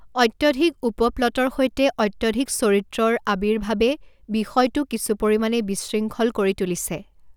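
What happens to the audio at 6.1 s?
Nothing goes wrong at 6.1 s: the speech continues intact, with no dropout, click, distortion or other fault at that point.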